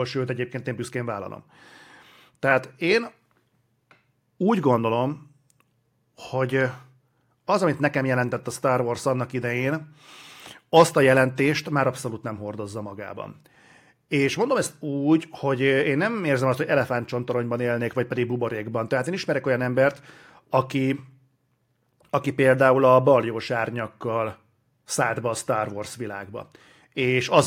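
Nothing stood out on listening to this speech recording.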